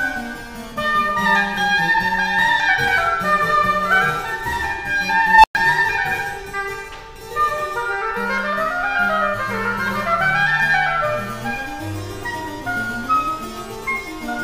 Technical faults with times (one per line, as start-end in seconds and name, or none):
5.26-5.55 unstable filter